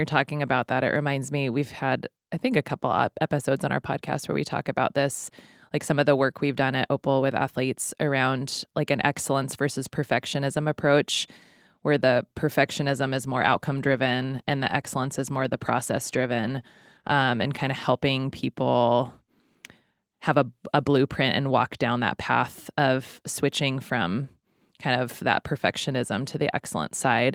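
At 12.65 s a call bitrate drop sets in, lasting until 18.01 s. The speech turns coarse and muffled. A falling bandwidth estimate starved the encoder of bits. The sound fits a fall from 32 to 18 kbps, bottoming out for about 4.5 s.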